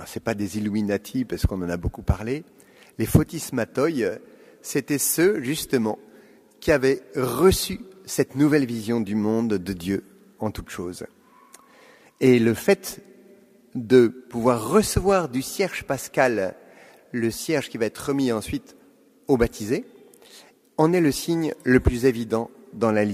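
Nothing in the audio stands out as a technical problem; it simply runs along with nothing going wrong at any point.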